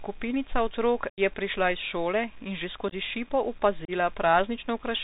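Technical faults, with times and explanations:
Throughout: Bluetooth CVSD headset codec. Nothing above 4 kHz gets through. Sibilants turn scratchy over a granular hiss, which fits a 64 kbps one-bit CVSD link.
1.10–1.20 s, 2.88–2.93 s, 3.85–3.91 s: unconcealed Bluetooth headset packet loss. Silence or an idle pattern fills the dropped packets, leaving abrupt holes. The first loses about 83 ms, and each later one about 30 ms, with the second broken into short bursts.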